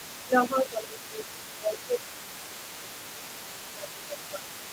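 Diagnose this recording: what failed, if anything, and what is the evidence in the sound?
Call processing failed: the echo canceller likely left part of the loudspeaker signal in the microphone path. The other side's voice leaking through is audible throughout, a faint second voice sitting roughly 20 dB below the main speech.

Also in call processing, with both sides talking at once, the canceller likely treated the talker as echo and turned everything down. This speech suppressed in double talk dips the voice by up to about 15 dB from 0.26 to 2.58 s, then around 10 dB from 2.79 s on.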